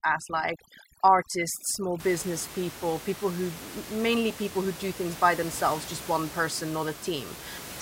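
Overdone noise removal runs from 0.0 to 2.0 s, before "people people who mainly". Bands near the noise floor vanish. The background breaks up into twinkling specks.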